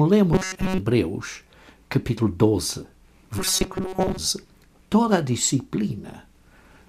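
From 0.33 to 0.78 s, and again from 3.39 to 4.18 s, the sound turns robotic. A rigid metallic buzz at 188 Hz sets in, following the original only roughly. The likely cause is repeated short buffers: a segment of about 5.3 ms loops while most new audio is skipped.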